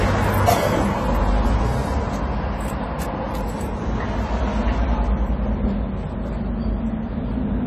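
From start to finish the sound stops dead at 14 kHz, with nothing above it, and the highs smear into a warbling, fizzy texture. That is likely AAC compression, fitting a bitrate near 32 kbps. Unlike a plain low-pass filter, the audible band itself is damaged.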